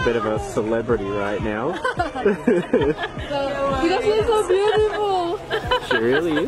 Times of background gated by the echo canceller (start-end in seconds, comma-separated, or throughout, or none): none